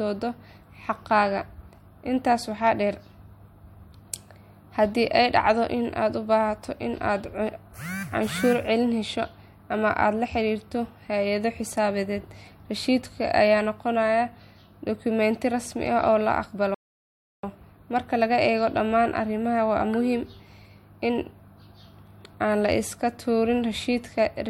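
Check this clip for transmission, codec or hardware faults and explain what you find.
There is one fault, a rebuffering stall. From 16.74 s to 17.43 s the speech cuts abruptly to silence and then picks up exactly where it left off, with nothing skipped or repeated. The player's buffer of downloaded audio ran empty, so playback halted until enough new data arrived to continue. The gap adds 0.69 s to the running time rather than removing any audio, so the speech is intact but interrupted by a clean dead pause.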